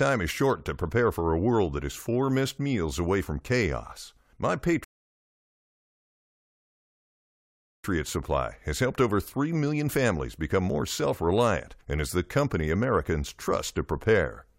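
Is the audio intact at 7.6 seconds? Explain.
No, 7.6 seconds falls inside a rebuffering stall that runs from 4.84 to 7.84 seconds. The player exhausted its downloaded audio and halted until more data arrived, so the speech drops to silence for about 3 seconds, and at 7.6 seconds nothing is playing. When playback resumes at 7.84 seconds it continues exactly where it stopped, so no speech is lost, but the pause adds 3 seconds to the clip.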